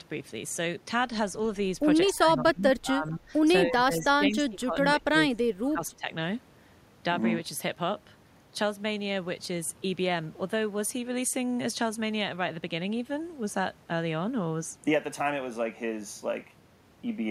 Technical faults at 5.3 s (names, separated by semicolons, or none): speech suppressed in double talk